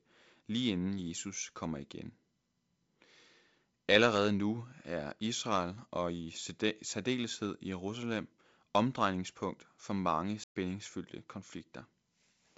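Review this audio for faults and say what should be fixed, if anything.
Just after "omdrejningspunkt for mange", the speech drops abruptly into silence from 10.44 to 10.56 s, a 120 ms gap, before carrying on. This is a playback stall, likely caused by the player running out of buffered data or its audio thread being blocked, so output halted until it recovered. To prevent it, keep a deeper playback buffer and run audio output on a high-priority thread that never waits on other work.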